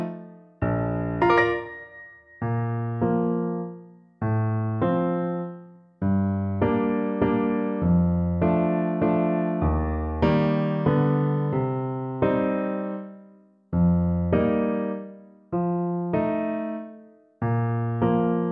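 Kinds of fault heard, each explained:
No audible faults present.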